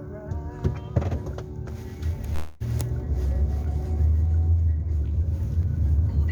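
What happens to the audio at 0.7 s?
Nothing goes wrong at 0.7 s; the audio plays through that moment intact, with no dropout, click, distortion or other fault to be heard.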